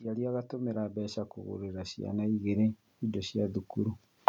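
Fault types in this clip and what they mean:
Automatic gain rising: the gain control judged the input too quiet and kept raising its level, so the speech and the background noise floor swell together by about 12 dB in a slow, steady climb running from 0.05 s to 4.24 s.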